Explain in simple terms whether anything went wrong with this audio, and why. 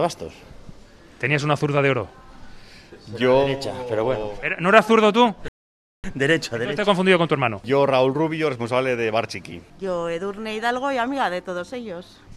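At 5.48 s the sound drops to silence, then picks up at 6.04 s exactly where it stopped: a rebuffering stall. The player ran out of downloaded audio and waited, adding 0.56 s.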